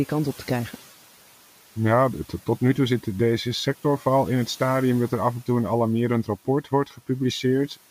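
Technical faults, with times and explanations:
6.64–7.0 s: speech cut by the noise suppressor. Just after "en toe een alarmerend", the suppressor treats quiet speech as noise and pulls it down by up to about 9 dB for around 150 ms. It sounds swallowed, with a dipped waveform envelope and faded spectrogram energy.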